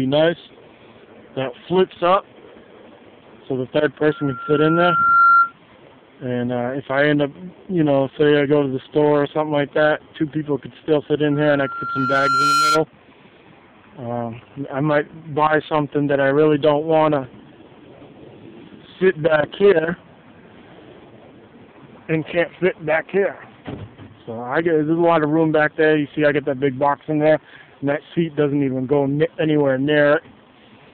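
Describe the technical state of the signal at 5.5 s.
At 5.5 s a loudspeaker feedback squeal ends. It runs from 4.07 to 5.53 s, a 1.4 kHz tone swelling over about a second to roughly 5 dB above the sound.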